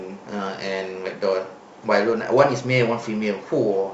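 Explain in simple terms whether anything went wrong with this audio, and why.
Nothing went wrong; this speech sounds as it should.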